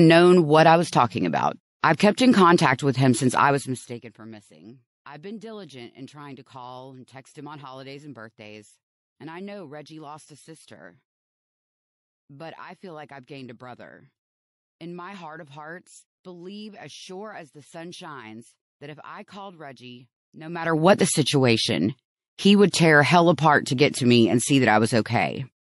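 Throughout the speech, the quieter detail swirls and turns watery, with metallic edges on s sounds. This is likely MP3 compression at a starved bitrate, around 48 kbps. It is heard all the way through, not just around attacks.

Pre-echo appears at 1.80 s, just after "I was talking about" and before "I've kept in contact", and again at 1.97 s, 22.71 s and 23.92 s, the last one before "to me and see". Each time, a hiss comes 24 to 36 ms ahead of a sharp onset, rising about 11 to 31 dB above the quiet before it. This fits long transform blocks that never switched to short ones, so noise meant for the attack spilled backward. Unlike the general swirl, it sits only in front of attacks.

From 3.44 to 4.21 s, between "contact with him since" and "missing I've been diligent", zipper noise appears. The level drops by roughly 25 dB in coarse, unsmoothed steps at about 100 per second, which lays a fine ticking over the sound. 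A smooth fade would fall silently, with no ticking.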